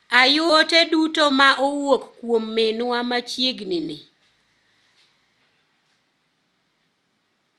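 Right around 0.49 to 0.51 s there's a skip ahead: roughly 0.4 s of the speech just vanishes, with no fill at all, and playback jumps straight to later audio that was already queued, so the two sides butt together almost seamlessly. From 0.66 to 1.81 s, and again from 2.51 to 3.23 s just before "ni ni", you get jitter buffer speed-up. The buffer was holding too much, so the receiver trimmed out tiny pitch-period slices over and over, about a tenth of a second in the first stretch and around half that in the second. That makes the talking run about 7% and 6% fast with no pitch change, which comes across as rushed.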